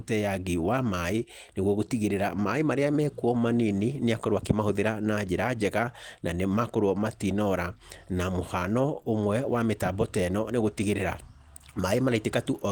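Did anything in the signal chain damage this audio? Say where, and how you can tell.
No, nothing damaged it.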